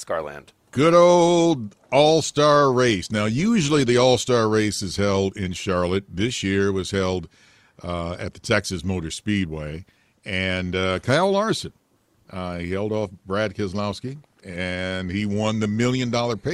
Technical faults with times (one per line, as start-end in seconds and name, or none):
none